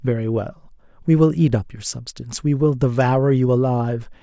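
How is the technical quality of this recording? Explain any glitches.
Nothing here to worry about: I don't hear any glitches, dropouts or other technical faults anywhere in this short bit of speech.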